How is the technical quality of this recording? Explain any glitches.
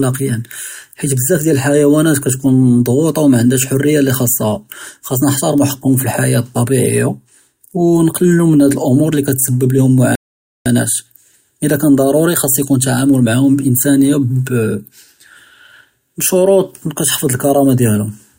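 There's one glitch in this speech recording: a rebuffering stall from 10.15 to 10.66 s. The player ran dry of downloaded audio, so playback just stopped and went silent for about half a second while it waited for more data. Once enough arrived, the speech picked up exactly where it had paused, with nothing skipped. So you hear a sudden dead gap in the middle of the flow that adds roughly 0.5 s of time without losing anything.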